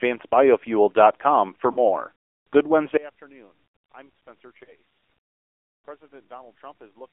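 Throughout, the speech has passed through the AMR narrowband mobile codec, which fits its 7.4 kbps mode. A pulse-driven vocal tract model rebuilds the signal inside a 300 Hz to 3.4 kHz line band. The codec damage is plainly audible: thin, buzzy, synthetic speech with nothing above that band.

From 1.72 to 1.83 s come lost AMR speech frames. Radio errors left the decoder without valid data, so it repeated its last pitch and vocal tract settings at falling gain. The result is a drawn-out, fading smear of about 40 ms that points to two missing frames.

At 2.97 s a sudden gain jump drops the level by about 24 dB and stays down until the end at 7.12 s. The likely cause is a gain setting or bit shift applied instantly without a ramp. Speech and background noise fall together in a single step.

At 4.64 to 4.72 s another lost AMR speech frame occurs, consistent with a single 20 ms frame failing its checksum. 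The concealment repeats the previous settings briefly, giving a short dip and warble before the quieter speech returns, rough for a moment.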